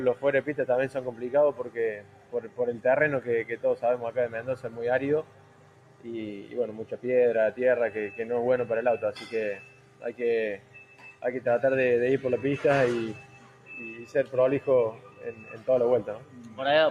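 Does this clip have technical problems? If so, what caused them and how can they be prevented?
Yes. A noise suppressor applied to music or sounds, a speech-tuned one, runs throughout, mistaking steady content for noise, so levels swing by around 10 dB and sustained parts pump.

The noise suppressor cut sound at 0.15–2.59, 4.56–6.99, 9.61–10.03, 10.58–11.22, 13.2–14.33 and 14.92–16.59 s. Held stretches and decays sink by up to about 9 dB while attacks still get through.

To prevent this, bypass speech noise suppression whenever the source isn't speech.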